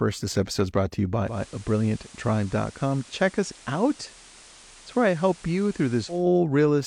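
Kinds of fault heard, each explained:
Digital radio blending to analogue: from 1.22 to 6.28 s the receiver, losing its digital signal, cross-fades over about 0.21 s to the station's FM broadcast. On a spectrogram, a hiss floor appears roughly 25 dB down; the waveform drops about 2 dB.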